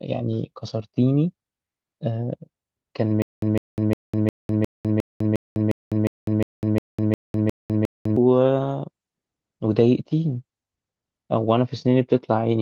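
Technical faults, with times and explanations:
3.22–8.16 s, stutter with silent gaps. A short burst of about 154 ms repeats 14 times. Each burst is followed by about 203 ms of digital silence. The cycle repeats steadily every 356 ms. The player or stream likely stalled here. At each retry it replayed the last fragment and then ran dry. That produces the even, mechanical stammer. The audio that should have filled those five seconds is gone.
8.59–12.62 s, call bitrate drop. The speech turns rough and watery. It also loses its top end, with the upper limit falling from 20 kHz to 12 kHz. The sound fits the encoder dropping from about 64 kbps to 19 kbps after the bandwidth estimate fell. With fewer bits, detail is coded coarsely and the high band is trimmed. The worst stretch lasts about 2.6 s. The quality has not recovered when the clip ends.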